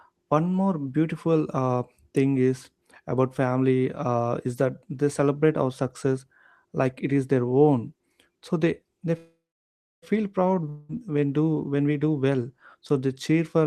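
Packets were likely held up in transit at 9.17 s, letting the jitter buffer run dry in a call audio freeze. The receiver stretches the last bit of speech into a buzzy tail that fades quickly and is followed by about 0.65 s of silence, filling the gap until 10.04 s. Speech then resumes exactly where it stopped, so nothing is lost, but everything afterwards arrives about 0.85 s later than before.

At 10.69 s, a long network dropout likely cut off delivery, and about 0.2 s of speech never reached the listener. The receiver covers the hole with a continuation of the preceding sound, a short buzzing smear lasting until 10.91 s with no silence in it. When speech returns, it jumps ahead, skipping the 0.2 s that went missing, so the speech seems to lurch forward.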